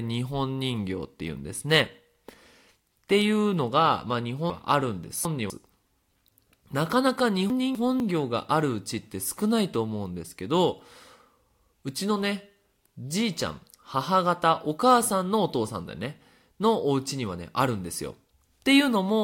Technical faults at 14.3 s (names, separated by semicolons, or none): none